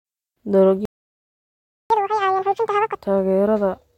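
From 0.85 s the speech drops to silence for about 1.05 s. That is a playback stall, most likely the player running short of data or being blocked. From 1.90 to 2.95 s the speech races at double speed, pitched up by roughly ten semitones. That is catch-up at higher speed, with resampling used to clear the backlog before it settles back to normal.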